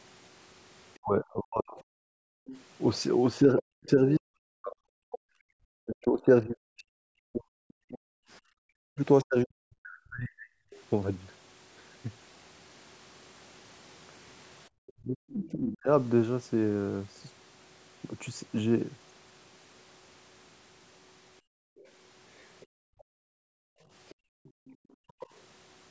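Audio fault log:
0.97–10.5 s and 14.97–15.89 s, speech suppressed in double talk: the talker's voice dips by as much as roughly 40 dB in pieces, around seven seconds in the first stretch and about a second in the second. This is likely an echo canceller that could not separate the talker from loudspeaker echo while both sides spoke. The waveform shows a ragged, hollowed envelope, and the spectrogram shows speech harmonics thinning or vanishing in patches.
1.78–5.95 s, 10.7–10.83 s, 14.87–15.51 s and 21.77–25.27 s, other side's voice leaking through: a second, fainter voice sits under the talker, around 20 dB down in the first stretch and around 30 dB down in the others. This is likely loudspeaker playback the echo canceller did not fully remove. On a spectrogram it appears as a weak, separate harmonic pattern that does not track the main voice.
2.06–2.46 s and 21.41–25.2 s, background gated by the echo canceller: while the loudspeaker was playing, the canceller clamped the microphone and the room sound dropped by about 40 dB and about 38 dB. 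The first gap lasts 0.4 s and the later one about two seconds in total. The waveform's noise floor falls to near-flat, and the spectrogram goes dark below its 8 kHz top edge until the canceller lets go.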